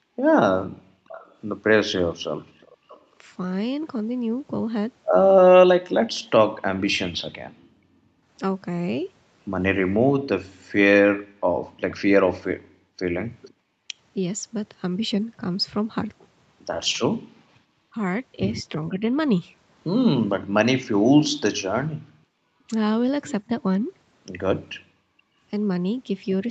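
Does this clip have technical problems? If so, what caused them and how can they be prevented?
Yes. Three echo-canceller faults can be heard in this speech.

Background gated by the echo canceller: from 0.0 to 2.89 s, 7.51 to 13.59 s, 17.15 to 20.55 s and 24.8 to 24.95 s, the room sound drops by as much as about 40 dB while the far end plays. This happens for roughly a second, one and a half seconds, under a second and a brief moment respectively. On a waveform the noise floor collapses to near-flat. On a spectrogram the background turns dark across all frequencies, then returns. Gentler suppression, or comfort noise inserted during gating, keeps the floor steady.

Echo leak: a faint delayed copy of the sound appears from 1.08 to 3.02 s, trailing by 562 ms at about 25 dB below the speech. It appears again from 11.9 to 13.53 s, trailing by 478 ms at about 35 dB down. On a spectrogram it shows as a weak duplicate of the harmonic pattern, shifted right by about half a second. 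The likely cause is a loudspeaker-side echo canceller that failed to remove everything its microphone picked up. Headsets, or a canceller with a longer, better-converged filter, prevent it.

Speech suppressed in double talk: the talker's level dips briefly at 13.87 to 13.94 s by roughly 10 dB. It dips in short pieces between 17.9 and 19.03 s by around 20 dB, and between 22.08 and 25.29 s by as much as about 40 dB. The waveform envelope shows sudden notches, and the spectrogram shows brief vertical gaps. This is likely the canceller mistaking simultaneous talk for echo. Better double-talk detection, or headsets that remove the echo at its source, avoid it.

The content above 8 kHz is absent, which fits a wideband Opus call at around 32 kbps.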